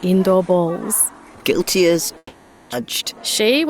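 From 2.17 s to 2.74 s there is a long network dropout, likely caused by a stall in packet delivery. The last sound is stretched into a buzzy, hissing continuation that fades out over about 550 ms, and a short gap of about 40 ms follows. When the audio resumes, roughly 400 ms is missing, so the sound picks up further along. The playout delay grows by something like 150 ms across the gap.

Immediately afterwards, from 2.81 s to 3.67 s, the receiver performs a jitter buffer speed-up to work off that extra delay. It trims short pitch-period-length slices again and again, around 70 ms in total, so playback runs at about 107% speed with the pitch unchanged. The result is a slightly rushed, compressed feel until the buffer is back near its target.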